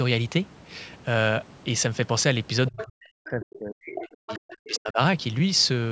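A short speech recording, band-limited to 8 kHz by ordinary call microphone processing, carries two kinds of fault. A second voice, the other side's voice leaking through, appears from 2.67 to 2.86 s at roughly 10 dB below the talker, returns faintly from 3.52 to 3.58 s at about 25 dB down, and again from 4.12 to 4.57 s at around 15 dB down. This is likely loudspeaker playback reaching the microphone that the echo canceller failed to subtract fully. Overlapping that leakage, the main talker's level collapses between 2.71 and 4.99 s, about two seconds in total, with the deepest dips reaching around 40 dB. This is speech suppressed in double talk. While both signals were present, the canceller likely could not tell local speech from echo and attenuated everything, so the talker fades and drops out in pieces throughout that stretch.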